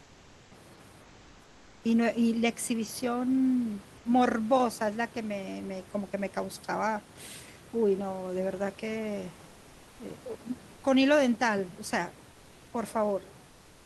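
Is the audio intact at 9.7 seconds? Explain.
No. From 9.47 to 9.99 s the room background is replaced by comfort noise: a steady, featureless hiss about 3 dB quieter, lasting 0.52 s. The likely cause is discontinuous transmission, where the sender stops during the pause and the receiver synthesises approximate background noise.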